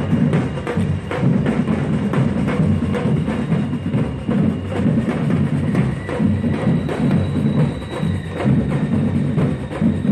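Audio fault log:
No faults detected in this clip.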